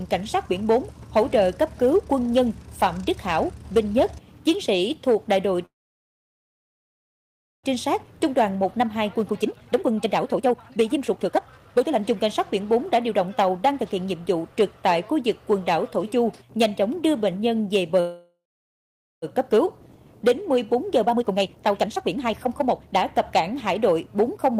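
The audio stops at 5.65–7.66 s and 18.0–19.25 s, with about 1.9 s and 0.8 s of silence, then resumes where it left off. These are call audio freezes, likely from delayed packets draining the jitter buffer. Jitter buffer speed-up follows each freeze: 7.76–13.8 s runs at 133% and 20.41–24.57 s at 128%, at unchanged pitch, trimming roughly 2 s and 1 s of backlog.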